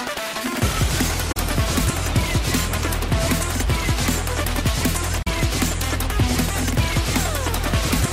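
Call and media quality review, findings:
Digital broadcast dropout at 1.32 to 1.37 s and 5.22 to 5.27 s. Receiver/decoder muting after bad frames, about 32 ms lost each, consistent with one frame. An 8 ms fade then true silence, not concealment smear or repeated audio, so not packet-loss concealment.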